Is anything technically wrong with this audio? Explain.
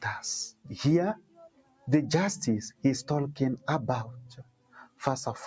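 Yes. A noise suppressor built for speech was left running on this sound, and it is the source of the trouble. The audio has passed through call microphone processing, which leaves nothing above 8 kHz.

Throughout, the noise suppressor treats sustained tones, ambience and decays as noise to be removed. Its gain swings by around 20 dB, so the level pumps: onsets pass while whatever holds or fades behind them is pushed down, making the sound flutter and thin out. Unlike a compressor, which reacts to loudness, this reacts to steadiness, so quiet transients survive while loud sustained sound sinks.

Three stretches are cut harder than the rest: 0.51 to 0.73 s, 1.15 to 1.87 s and 4.24 to 5.02 s, each dropping by as much as about 19 dB. The suppressor has judged these portions to be noise and ducked them. What separates this from a dropout is that the level falls rather than vanishing, and sharp attacks inside a stretch mostly still come through.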